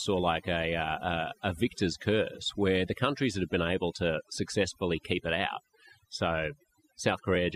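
Overdone noise removal runs throughout the speech. Strong suppression cuts bands near the noise estimate, leaving near silence with twinkling specks.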